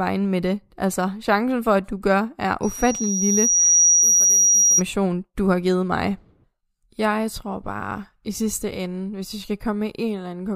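From 2.63 s to 4.82 s, just after "at du gør er", a loudspeaker feedback squeal takes over. A microphone is picking up the loudspeaker it feeds. At about 5.8 kHz the loop gain rose above one, so that frequency kept reinforcing itself. The tone swells over roughly a second and a half. It climbs to around 5 dB above the speech. It cuts off before "du har givet mig".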